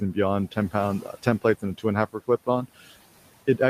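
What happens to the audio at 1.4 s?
At 1.4 s the noise suppressor is cutting speech, in a span from 1.02 to 1.43 s. It mistakes quiet speech for room noise and turns it down by up to about 17 dB, making parts sound swallowed. On a spectrogram, energy thins in short patches totalling roughly 150 ms, and the waveform envelope dips there.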